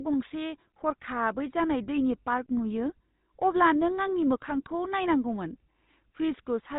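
From start to finish the speech carries GSM full-rate codec damage. The vocal tract is modelled and excited by sparse, evenly spaced pulses, which gives a buzzy, gravelly roughness. Nothing above 4 kHz survives. The coding is plainly audible and fits a 13 kbps rate.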